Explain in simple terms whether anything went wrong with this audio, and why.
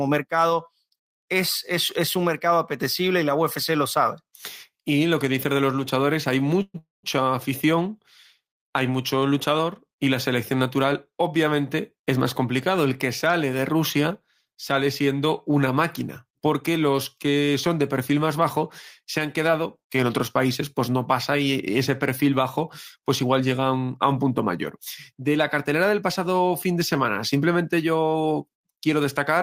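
Two call audio freezes occur, at 6.62 to 6.76 s and 6.78 to 7.05 s. The sound stretches into a fading buzz, then silence, likely from delayed network packets.

Later, from 22.96 to 24.31 s, a jitter buffer speed-up plays the speech about 7% faster at unchanged pitch, trimming roughly a tenth of a second of backlog.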